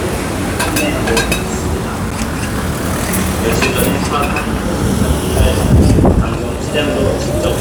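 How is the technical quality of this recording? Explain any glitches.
There is one glitch: a block of digital silence at 2.11 s. For 10 ms the signal drops to silence and then resumes, with no fade at either edge. A run of samples replaced by zeros like this is the pattern left when an output buffer isn't filled in time. The abrupt step down to zero and back up puts a discontinuity at each boundary. At only 10 ms the two edges merge into a single sharp tick rather than an audible hole.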